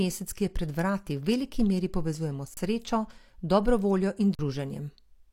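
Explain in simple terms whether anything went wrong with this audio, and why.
Underrun with held sample, at 2.54 s and again at 4.35 s: the speech briefly freezes for 30 ms the first time and 40 ms the second. The playback buffer ran dry, so the converter held its last value and the waveform sat flat until fresh data arrived. Roughly that much speech was skipped during each gap, so the sound resumes further along in the speech rather than picking up where it left off.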